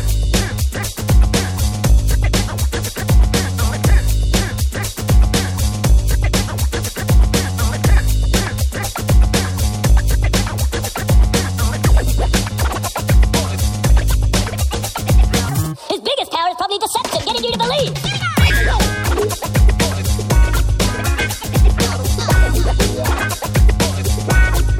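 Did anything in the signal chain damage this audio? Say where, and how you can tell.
Yes. From 15.49 to 18.50 s the audio plays 1.51 times too fast and about seven semitones high, a section at the wrong speed, likely from a mismatched playback clock.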